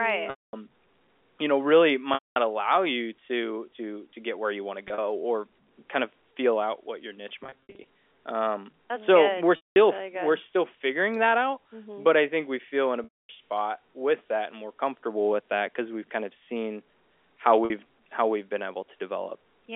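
Speech over a telephone-band G.711 line, limited to roughly 300 Hz–3.4 kHz, with repeated dropouts from packet loss with pitch repetition at 0.30–0.53, 2.14–2.36, 4.88–4.98 (after "where you want to"), 7.44–7.84 (after "out what your niche"), 9.56–9.76, 13.04–13.29 and 17.65–17.70 s (after "kind of seen how"). The receiver repeats the last pitch period to fill each gap, so the brief losses sound like a held, buzzy tone. The 200–250 ms losses fade into silence before speech cross-fades back in.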